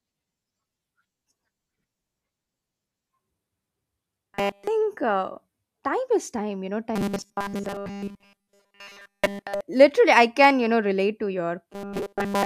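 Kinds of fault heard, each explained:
Robotic sound from repeated short buffers: the speech becomes a rigid metallic 200 Hz buzz, likely from one 5 ms chunk looping, seen as flat evenly spaced harmonic stripes on a spectrogram.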